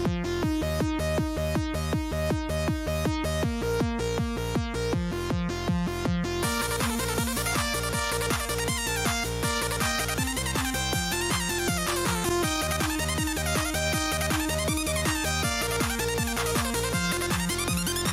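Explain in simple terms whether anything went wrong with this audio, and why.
Power to the microphone input was switched while it was live, twice, causing a phantom power thump each time. The sudden voltage jump produces a deep thud, at 1.22 to 1.59 s and again at 12.29 to 12.44 s, dying away within about 84 ms and 35 ms.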